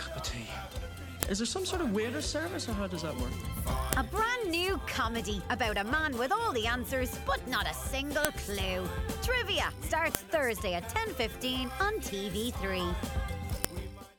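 Sharp, loud clicks snap through the sound at 1.23, 3.93, 8.25, 10.15 and 13.65 s, each a brief spike regardless of what the audio is doing. This is a file header played as audio: pieces were joined with their WAV headers left in, so those bytes play as samples.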